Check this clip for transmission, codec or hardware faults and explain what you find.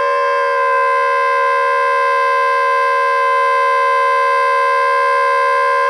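No transmission, codec or hardware faults are audible in this audio.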